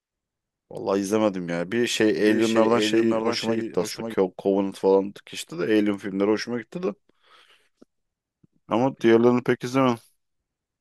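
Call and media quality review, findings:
Doubled audio track, 2.20 to 4.14 s. Speech heard twice. Second copy trails by about half a second, a few dB quieter, full-band, dry, no room decay. Starts and stops abruptly. Likely cause: a second capture path with extra latency mixed into the send, or an edit leaving two offset copies. Fixed offset and flat level point to a duplicated digital stream, not acoustic echo.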